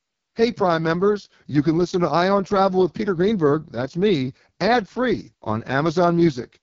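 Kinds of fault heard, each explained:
AMR wideband (HD Voice) codec: the speech was coded so coarsely that it fits AMR-WB's lowest 6.6 kbit/s mode, starving its pulse-driven vocal tract model of detail. Throughout, the speech sounds rough and raspy, with nothing above about 7.3 kHz.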